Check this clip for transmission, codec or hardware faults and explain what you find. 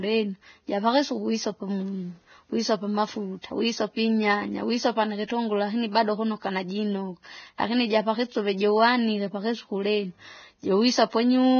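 The speech carries a heavy codec fault for its whole length, most likely Vorbis compression at a low quality setting. Nothing reaches above 6.6 kHz, and the treble below that limit is quantised so coarsely that its fine detail is replaced by noise of similar energy. The result is hissy, grainy speech with roughened tones and smeared consonant onsets, which points to a bitrate of roughly 17 kb/s. A spectrogram shows a flat ceiling at 6.6 kHz, with speckled, blotchy upper bands beneath it.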